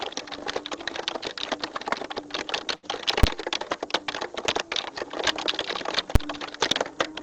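At 2.75 s a packet arrived late and the jitter buffer ran dry, so the receiver held the last sound for about 76 ms until it came, then carried on from the same point. Nothing is lost, but the sound hangs briefly with a slight buzz or dip, and everything after lands about 76 ms later. This is a short stall from a late packet, running to 2.85 s.

At 3.23 s and again at 6.15 s a calculation produced invalid numbers that were forced to full scale for a block of about 5.8 ms, which fits a 256-sample processing block. Each short block is heard as a single loud bang.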